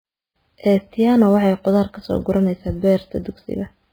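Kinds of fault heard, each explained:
MP3 compression: The speech has no content above 5 kHz and a heavily damaged, watery texture throughout, with weaker frequency components flickering in and out from moment to moment and a swirling quality on the brighter parts. The sound points to a lossy encoder badly short of bits, likely MP3 at a very low rate of about 16 kbps. The encoder cuts the treble at a fixed point and zeroes the quieter spectral lines.
sample clock jitter: A fine hiss-like roughness sits on the speech across the whole clip. It rises on louder and brighter passages and falls away in the pauses. This fits a converter clock that wanders by around 7 microseconds, so each sample is taken slightly early or late. The resulting error grows with how steeply the waveform is changing. Here it lies roughly 35 dB below the signal, enough to be heard as grit riding on the speech.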